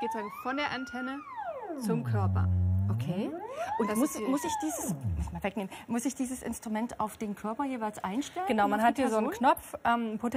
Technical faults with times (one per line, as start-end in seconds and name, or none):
none